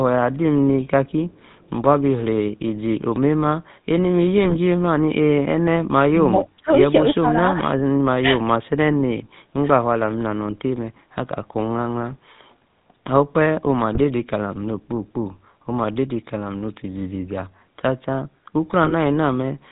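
From start to finish the speech carries the GSM full-rate codec's signature: a buzzy, gravelly roughness and nothing above 4 kHz. The grain fits 13 kbps full-rate coding, where the vocal-tract model is driven by a coarse, regularly spaced pulse excitation. The roughness sits in the texture of the voice itself rather than in dullness or a band-limited hiss, which sets it apart from plain narrowband filtering.

From 4.38 to 4.56 s, GSM bit errors break the voice into squawks and gargling. The span suggests roughly nine corrupted frames, each decoded with damaged filter, pitch or gain values, so the spectrum bends and the level jumps frame by frame. Shorter bursts of the same kind hit at 13.94 to 14.01 s and 18.84 to 18.93 s, each about three frames long. Unlike a dropout, these bursts add harsh, wrong sound instead of leaving silence.

Between 6.62 and 6.70 s the voice dips by about 20 dB for roughly 70 ms. 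The likely cause is speech suppressed in double talk: the echo canceller, unable to separate this talker from loudspeaker echo while the far side spoke, turned the signal down. This is a level drop, which distinguishes it from the bit-error bursts and from packet loss.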